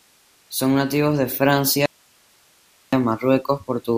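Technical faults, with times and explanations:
1.86–2.93 s, audio dropout to a faint residue: just after "nativos de" the speech cuts off abruptly and for about 1.07 s nothing remains but a thin bed of hiss, roughly 40 dB below the speech level, before the speech snaps back mid-flow. The hard edges at both ends make it sound unlike a natural pause or fade. The likely cause is a brief loss of the wanted signal upstream while the downstream path stayed live, so only its own noise floor carried through the gap.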